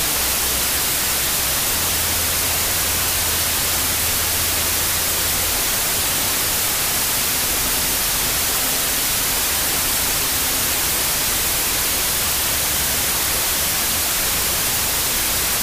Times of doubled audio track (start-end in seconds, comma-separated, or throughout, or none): none